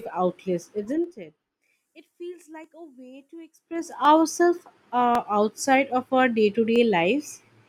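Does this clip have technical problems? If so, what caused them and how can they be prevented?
Yes. Zipper noise appears from 0.76 to 1.58 s, where the level falls by roughly 25 dB in 2 dB jumps at about 15 steps per second. It returns from 3.56 to 3.95 s, just after "a way to", where the level rises by roughly 25 dB in 2 dB steps at about 30 per second. Each jump changes the gain instantly with no smoothing, so every step leaves a small click, and the run of clicks makes a ticking zip over the speech while the level moves. To prevent it, ramp gain changes smoothly across samples rather than stepping them per buffer.

Dropped samples produce single sharp clicks at 2.64 s, just before "a way to", and at 4.05, 5.15 (just before "outside of our") and 6.76 s. Each loses only a fraction of a millisecond, far too little to remove any sound. The waveform instead jumps straight to a later value, and that discontinuity shows as a thin vertical line across the spectrum. 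The likely cause is a brief buffer underrun or a timing glitch in capture or transfer. To prevent it, use larger buffers and keep the audio thread free of competing load.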